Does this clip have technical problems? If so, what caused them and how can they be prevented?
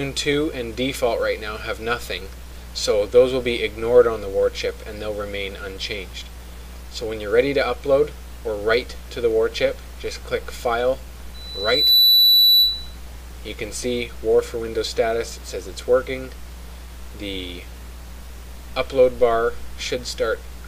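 Yes. From 11.34 s to 12.97 s there is loudspeaker feedback squeal, a single 4 kHz tone that swells out of the audio in well under a second and peaks around 10 dB above it. A microphone was picking up the loudspeaker it fed, and at 4 kHz the loop gain passed one. Unlike a steady whine or a constant test tone, it builds on itself and then stops. Keep microphones out of the loudspeakers' coverage and lower the gain near 4 kHz.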